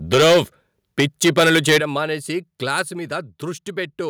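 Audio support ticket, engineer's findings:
Microphone overload, 0.13–0.41 s: harsh crackle on loud syllables, peaks about 13 dB over full scale, close to a third of samples flattened. Likely cause: mic input gain set too high, converter ceiling cutting waveform tops.
Microphone overload, 0.99–1.78 s: same gritty edge, peaks about 11 dB over, around a tenth of samples clipped. Long stretch.
Microphone overload, 2.78–2.80 s: brief crack, about 5 dB over, very few samples clipped.

Microphone volume stepped down, 0.14 s: sudden level drop of about 2 dB, voice and background together. Likely cause: call software's automatic gain control cutting device input gain after detecting clipping.
Microphone volume stepped down, 1.8 s: abrupt drop of about 9 dB immediately after the long overload.
Microphone volume stepped down, 2.82 s: about 3 dB step right after the short crack.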